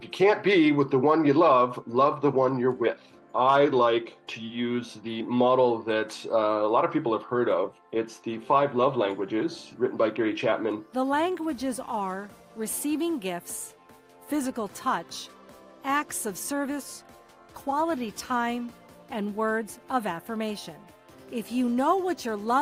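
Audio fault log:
No fault can be heard anywhere in the recording; the signal holds continuity throughout.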